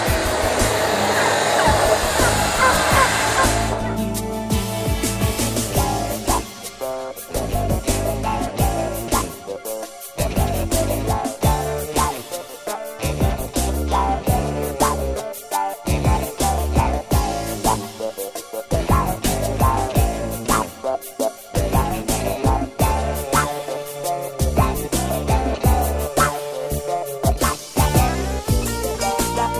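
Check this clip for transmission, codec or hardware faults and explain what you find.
No transmission, codec or hardware faults turn up in this clip.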